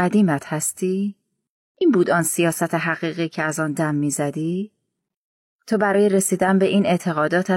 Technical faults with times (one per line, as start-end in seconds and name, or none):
1.77-1.82 damaged data in a compressed stream
5.90-5.95 damaged data in a compressed stream